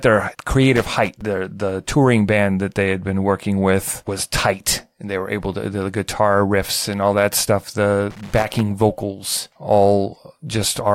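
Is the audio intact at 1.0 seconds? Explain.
No, 1.0 seconds falls inside a burst of loose connector crackle running from about 0.76 to 1.21 s, just before "the touring band that". A worn contact is making and breaking, chopping the signal into irregular scratchy crackle.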